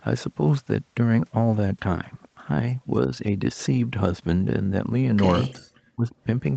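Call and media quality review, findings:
Speech suppressed in double talk, 5.43–5.51 s: brief dip of about 10 dB. Likely echo canceller unable to separate near-end talker from loudspeaker echo, attenuating both.

Speech suppressed in double talk, 5.94–6.14 s: deeper cut of about 30 dB, roughly a fifth of a second, speech nearly gone. Likely same mechanism: suppressor treats overlapping far-end signal as echo, ducks the talker.

Audio band tops out at 8 kHz throughout, fitting the Opus call path at 24 kbps.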